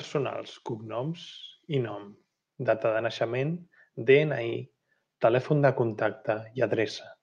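No technical faults can be heard anywhere in the speech. There is nothing to point to at any moment and no mechanism to explain.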